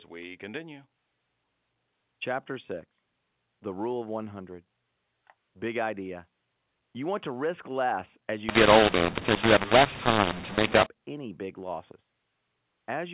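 From 8.49 to 10.86 s, A-law telephone samples are decoded as mu-law, a mu-law and A-law mix-up. Levels come out scrambled, some too loud and others too quiet, so the speech turns harsh and distorted, and the gaps fill with noise.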